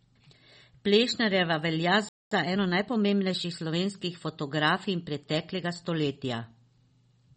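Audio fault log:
Throughout: MP3 compression. Weak frequency lines switch on and off between frames. That gives a watery, swirly texture. The damage is plainly audible, and likely comes from a low bitrate around 32 kbps.
2.09 to 2.31 s: playback stall. The speech stops mid-flow and goes silent for about 0.23 s. The likely cause is the player running out of data or its thread being blocked. The sound resumes once it recovers.
2.31 to 3.81 s: time-compressed catch-up. Right after the gap, the speech runs hurried, at 1.15 times normal speed. Pitch stays normal. The player shortens its backlog by cutting out small pieces and cross-fading the joins.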